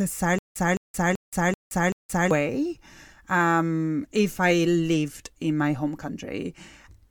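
From 0.39 to 2.31 s, stutter with silent gaps: a 212 ms burst recurs five times with dead silence between, not seamlessly, likely from stalling.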